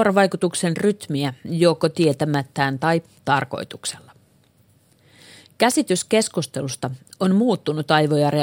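From 0.2 s to about 8.17 s, sharp ticks of uneven strength run through the speech at a steady rate, roughly one every third of a second, around thirty in all. These are word clock ticks. The receiving device runs on its own clock rather than locking to the sender's digital link. The two clocks drift apart by something like 70 parts per million, and each time they slip past each other a single sample is dropped or repeated, producing one click.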